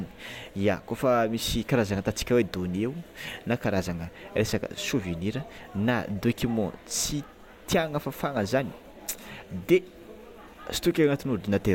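Speech recording with no audible technical faults.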